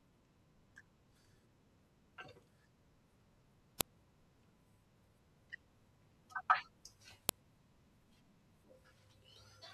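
File header played as audio, at 3.81 s and again at 7.29 s: each time a sharp, loud click snaps through the speech, independent of whatever the talker is doing at that instant. The recording was assembled from separate WAV pieces whose headers were never stripped, so at each join the few dozen bytes of header data are read as sample values. That burst of non-audio numbers plays as a brief, harsh transient marking where a new piece begins.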